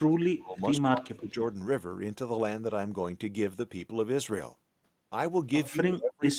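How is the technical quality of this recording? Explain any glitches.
The recording has three clear level dropouts in the speech. From 0.0 to 0.6 s, 0.85 to 1.38 s, and 5.69 s to the end, the speech sinks by roughly 25, 20 and 30 dB. This is likely speech suppressed in double talk: the echo canceller mistook the talker for loudspeaker echo and attenuated it.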